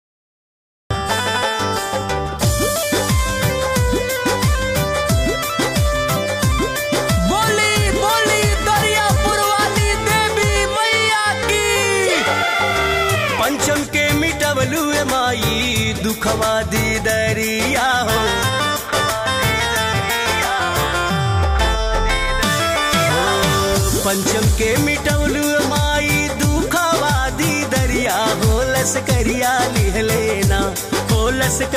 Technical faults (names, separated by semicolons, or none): cut-off start